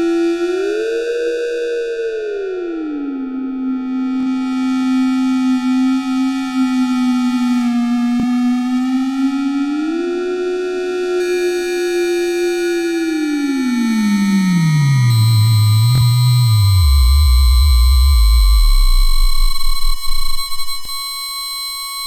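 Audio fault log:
4.21–4.26 s, 8.20–8.24 s, 15.95–16.01 s, 20.85–20.89 s: Bluetooth stutter. Late or lost packets made the receiver replay its last slice, giving a brief buzzing repeat. The sound then skips ahead by about 23 or 46 ms, consistent with one or two dropped frames. On the waveform and spectrogram each event shows as identical repeated blocks ending in an abrupt discontinuity.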